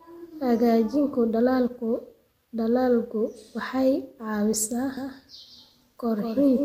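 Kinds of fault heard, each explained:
Doubled audio track: the speech was likely picked up a second time through a slower path, or an edit left two out-of-step copies overlapping. From 4.97 s to the end, a second full-band copy of the speech runs about a fifth of a second behind the original, roughly 5 dB quieter. It has no decay or room colour, so each syllable returns as a dry, distinct repeat, and it starts abruptly rather than building up.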